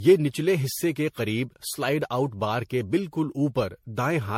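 Throughout the speech, the sound points to generation loss: the audio was likely decoded and re-encoded with MP3 around seven times, at a rate that fits 64 kbit/s. Every pass requantised on a shifted frame grid, so coding noise and missing spectral bands piled up. The result is a swirling, hollow texture worse than that bitrate alone would give, consonant onsets smear, and nothing sounds above 16.5 kHz.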